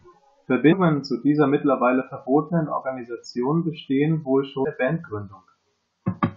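A short glitch cuts into the speech at 0.71 s, and a second, briefer glitch follows at 4.64 s. Both are damaged data in a compressed stream: at each point some bytes of the encoded file were wrong, so the decoder misread the affected frames, lost its place in the bitstream and had to hunt for the next valid frame header, producing these momentary disruptions.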